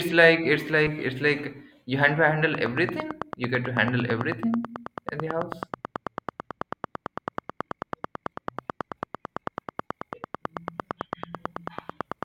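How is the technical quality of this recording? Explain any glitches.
The recording has two clear technical faults: a single decoding glitch near the start, and a steady ticking that runs from early on to the end.

A corrupt frame decoded at 0.86 to 0.90 s. One compressed frame arrived with flipped bits and was played anyway, so misread values put energy at the wrong frequencies, fairly loud, for about 30 ms. It sounds like a short chirp or blip. On a spectrogram it shows as a brief, out-of-place smear.

A train of clicks runs from 2.55 s to 12.24 s, about a hundred regularly spaced pulses at 9.1 per second. Each one stands well above the speech and keeps ticking through the pauses. The likely cause is interference or a faulty connection or power supply. On the waveform they show as evenly spaced spikes, and on the spectrogram as thin vertical lines.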